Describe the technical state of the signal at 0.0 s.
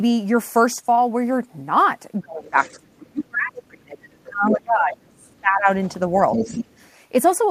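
At 0.0 s the speech signal is intact, with no audible technical fault at that moment.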